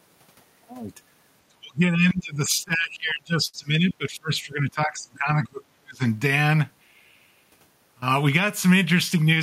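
From 1.48 s to 6.04 s the speech is speech suppressed in double talk: for about four seconds it dips, thins and breaks up, falling by around 30 dB at its deepest. This is likely an echo canceller mistaking the talker for loudspeaker echo while both sides spoke, unlike a network dropout, which removes audio regardless of what the far end is doing.

Between 2.09 s and 3.56 s, repeated stalls (stutter) appear as nine brief hangs where the last sound is stretched, the longest 58 ms and together 134 ms. The jitter buffer kept running dry on late packets, so the audio drags, but unlike packet loss none of it is missing.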